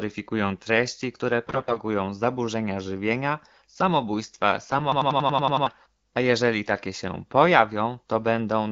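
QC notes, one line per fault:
1.47–1.80 s and 4.65–4.76 s, AMR bit errors: right after "treści które" the sound turns hoarse and gargly for about a third of a second, then again for a shorter blip just after "samobójstwa". Pitch and level hold, but the texture goes scratchy. That's the weaker-protected bits in the AMR-WB frames arriving flipped, at around one bit in ten, so the excitation pulses land wrong and the fine gain and spectral values drift.
4.92–5.67 s, system hang loop: just after "samobójstwa" and before "a jeżeli takie się", a 92.9 ms slice of audio repeats exactly, 8 times, giving a machine-gun stutter at 10.8 Hz. The loop length fits a 4096-sample buffer, and the stall is long enough that about seven tenths of a second of real audio is gone. It sounds like the system froze while the sound hardware kept replaying the same ring buffer.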